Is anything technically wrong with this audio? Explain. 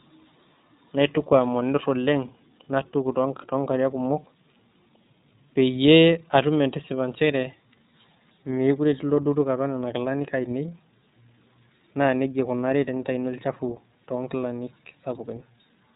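Yes. The iLBC codec shapes the speech from start to finish. The audio is cut off above 3.8 kHz, giving a narrowband telephone tone. Each frame is coded independently, in a way that fits iLBC's 30 ms mode at about 13.3 kbps, so the speech is plainly rough and synthetic.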